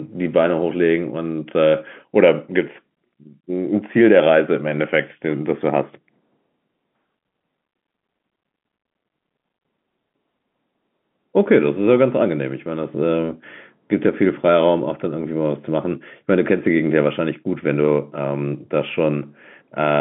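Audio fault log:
No faults logged; the speech sits in the G.711 telephone band of roughly 150 Hz to 3.4 kHz, with nothing above 3.7 kHz, as expected of that coding.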